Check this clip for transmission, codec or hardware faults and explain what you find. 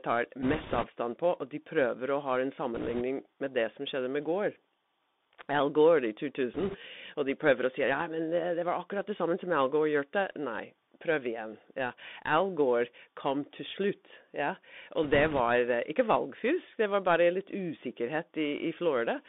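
Yes, there's a codec problem across the whole clip, plus four short bursts of link damage.

Bluetooth CVSD headset codec, throughout: the speech sits in a narrow telephone band of roughly 200 Hz to 3.6 kHz, which fits a 64 kbps CVSD headset link. CVSD sends one up-or-down bit per sample with an adapting step, so fast, loud high-frequency detail outruns the step size. You get scratchy s sounds, some grit on louder passages, and a granular hiss under the voice. The damage is plainly audible.

Bit errors on a Bluetooth voice link, at 0.43 to 0.87 s, 2.75 to 3.03 s (just before "med det som skjedde"), 6.54 to 6.77 s and 15.03 to 15.40 s: flipped bits on the CVSD stream. Each bit only nudges the waveform a small step and the error fades quickly, so there are no hard clicks. Instead there's a rushing, crackly noise over the speech. The error rate is a few percent in each burst, a little heavier in the first one.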